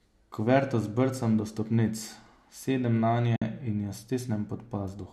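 At 3.36 to 3.42 s, just before "in jo", the speech sinks into a short silent hole from AAC frame loss with muting. The decoder zeroed roughly 60 ms of spectrum, which fits about six short low-delay frames, and the overlapping windows fade the sound out and back in. Unlike a hard sample-level dropout, it has soft edges, with the light coding damage of what is likely AAC-ELD coding on either side.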